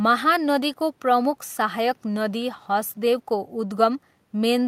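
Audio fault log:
No faults are heard in this speech recording. A faint room noise sits about 41 dB below the speech, part of the space where the microphone was rather than anything the system added.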